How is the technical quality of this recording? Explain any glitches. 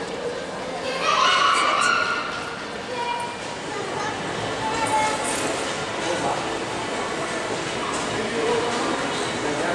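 No glitches or technical faults can be heard anywhere.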